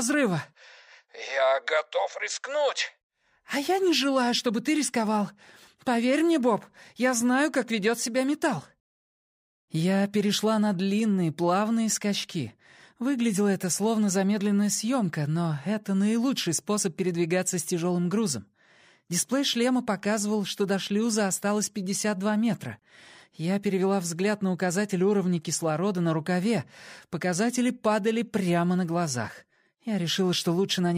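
No dropouts, clicks, distortion, level jumps or timing errors anywhere in the clip; nothing to flag.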